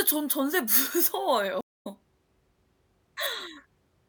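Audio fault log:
1.61–1.87 s, stream reconnect: the speech drops out for about 0.19 s, then comes back roughly a tenth of a second further on, so a little is skipped. The connection broke, the player reconnected and started a fresh decoder mid-stream, which mutes or fades in its first frames.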